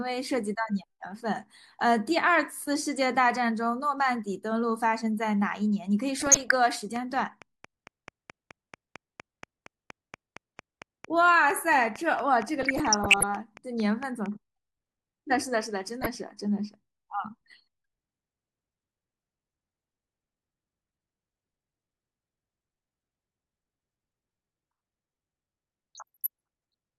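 Weak reception lets bit errors slip past DAB error correction into the MP2 audio data, so single sub-bands get short blips of noise or jump in level for up to a frame. This DAB burbling first appears from 6.16 to 6.52 s, with errors that point to a bit error rate around half a percent. From 6.96 to 14.27 s a train of clicks follows, likely from interference from nearby equipment or a faulty connection or power supply. About thirty near-identical ticks arrive at a regular 4.39 per second, peaking a few dB above the speech and audible in the pauses as well. Within that run the burbling returns from 12.61 to 13.23 s. It recurs briefly from 16.02 to 16.16 s, then again from 25.95 to 26.27 s at a slightly lower error rate.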